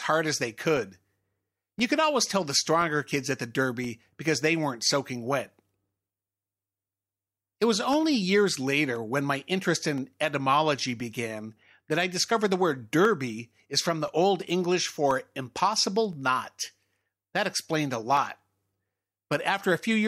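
A periodic USB or driver dropout blanks about a millisecond every 1.02 s, from 0.77 s to 19.2 s, leaving roughly twenty evenly spaced ticks in the speech.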